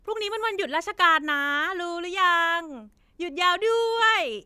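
No technical faults are audible in the recording.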